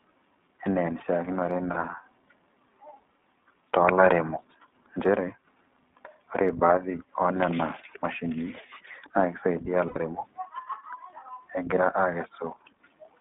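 All the way through, the speech runs through the iLBC codec: nothing above about 3.6 kHz or below 200 Hz, and a rough, slightly synthetic edge that fits its 15.2 kbps mode. At 9.88 to 9.97 s there are lost iLBC frames, about 80 ms (which fits four 20 ms frames). The decoder fills the gap with a held, buzzy vowel-like sound, then the voice snaps straight back.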